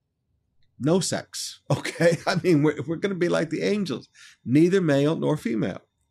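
No technical faults can be heard anywhere in the speech.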